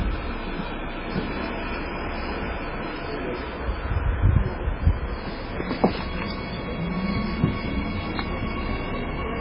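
From start to finish, the audio carries heavy MP3 compression damage. Nothing sounds above about 5.3 kHz, so the top end is cut off and dull. Weak frequency components flicker in and out between frames. That gives a watery, swirling texture, with metallic chirps on bright sounds and smeared attacks. The encoder was likely starved of bits. The damage fits a very low bitrate, around 16 kbps.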